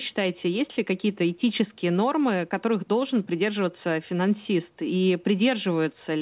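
A speech recording, and nothing is technically wrong with it.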